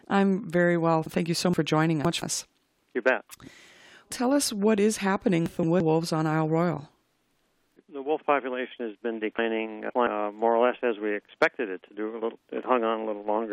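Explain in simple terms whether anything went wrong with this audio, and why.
Chunks out of order at 1.54–2.22 s, 5.46–5.80 s and 9.39–10.07 s: a 0.17 s piece plays late, after one or more pieces that should follow it, so the sound jumbles briefly.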